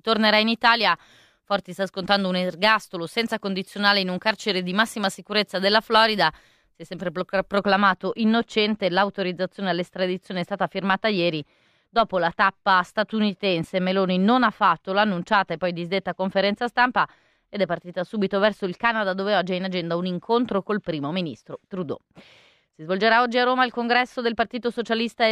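Speech, and from 7.59 s, right after "è sempre", to the end it goes dull: de-emphasis applied wrongly, a treble cut with no matching boost, sagging about 14 dB by 10 kHz.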